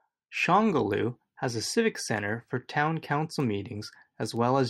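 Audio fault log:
3.40 s and 4.37 s: bit error spike. A single flipped bit jolts one sample, then two adjacent samples, by a power-of-two step before snapping back. Each is a sharp tick unrelated to the speech, peaking near -26 dBFS and -32 dBFS. On a spectrogram each shows as a thin full-height vertical line, and on the waveform as a lone needle.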